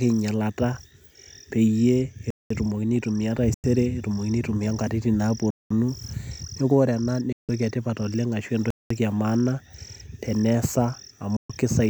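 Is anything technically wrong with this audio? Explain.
Yes. The speech is broken by two kinds of silence.

Gap between chunks: at 2.30 to 2.50 s, 5.50 to 5.70 s (just after "etumokini aitumia nkatitin") and 8.70 to 8.90 s, the sound stops abruptly for 200 ms and resumes just as abruptly. The holes recur every 3 s, which points to audio delivered in 3-second pieces with silence inserted at each join. This can come from codec padding or from playback that starts each piece late. Nothing is missing, but the flow is interrupted.

Digital broadcast dropout: at 3.54 to 3.64 s (between "peyie etumokini aitumia" and "etumokini aitumia nkatitin"), 7.32 to 7.49 s (just before "etipat oleng' ashu") and 11.36 to 11.50 s, the audio fades out within about 3 ms and goes silent for 96, 160 and 128 ms. The receiver muted when incoming frames were lost or failed checking, and restored sound once valid frames returned. 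Unlike the chunk gaps, the audio sent during these holes is lost.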